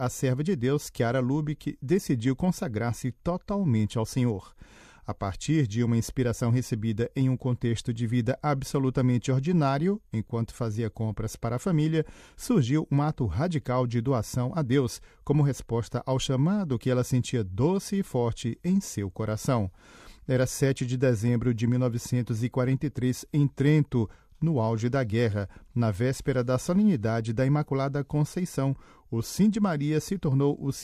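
Nothing in this recording trips the ear: no dropouts, glitches or distortion turn up anywhere along the way.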